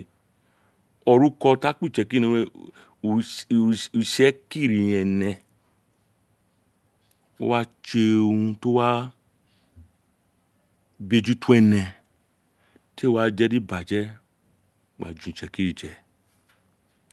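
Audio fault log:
No faults found in this speech clip; the call-codec path shows only its ordinary coding character, with the top end rolled off near 12 kHz, consistent with Opus at around 32 kbps.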